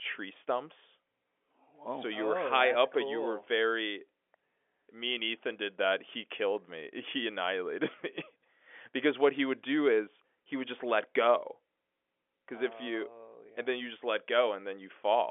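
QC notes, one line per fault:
No faults heard in this telephone-band speech.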